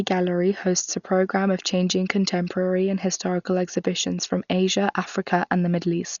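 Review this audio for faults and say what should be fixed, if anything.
Throughout the speech the sound is dull and muffled, with nothing above 7 kHz and a rough, fluttering noise around tones. This is likely Dolby Digital compression at a starved rate, around 48 kbps. The encoder narrowed the band and left many frequency lines without mantissa bits, so the decoder filled them with dither noise. To prevent it, encode at a much higher bitrate or keep a lossless master for delivery.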